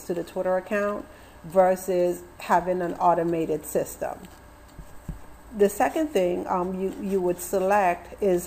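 Nothing in this recording trips up the ear; there's no glitch, dropout or other technical fault to point to anywhere along the way.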